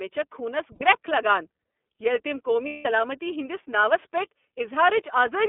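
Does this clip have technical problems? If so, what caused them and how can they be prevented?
Yes. Under the whole recording there is a fine hiss and graininess that thickens on loud, bright speech sounds and drops away in the pauses. That is sample clock jitter: the converter's clock wanders by something on the order of a few microseconds, so each sample lands slightly off time. Steep, fast-changing parts of the waveform suffer most, leaving an error roughly 25 dB below the speech. A clean, low-jitter clock source, or a converter with good clock recovery, prevents it.

The speech also sounds boxy and slightly rough and synthetic throughout. The band runs only from about 250 Hz to 3.5 kHz, so there is no air or sibilance above that. This is the iLBC codec, a narrowband VoIP coder. The damage here fits its 13.33 kbps mode with 30 ms frames, where each frame's excitation is coded on its own and the fine detail of the voice is simplified. 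A wideband codec such as Opus avoids both the narrow band and the coding roughness.

Twice the voice turns into a brief held, buzzy vowel. The first is from 0.75 to 0.82 s, about 60 ms, just before "گرٛکھ لگان". The second is from 2.66 to 2.86 s, about 180 ms, and fades as it goes. These are lost iLBC frames. Packets went missing, and the decoder filled each gap by repeating the last pitch cycle mixed with noise. The first gap fits two 30 ms frames and the second fits six. Because each frame decodes independently, the voice snaps back right after each gap. Forward error correction, redundant packets or a better-managed network path would prevent the losses.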